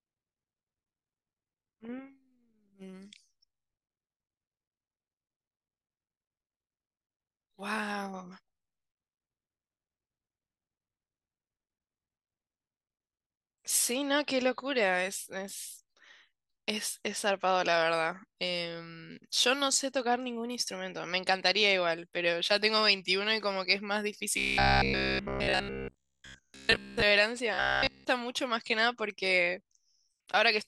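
From 24.38 to 27.03 s and 27.54 to 28.06 s, robotic sound from repeated short buffers: a metallic 66.8 Hz buzz, likely from looping 15 ms chunks, showing rigid, evenly spaced spectrogram harmonics.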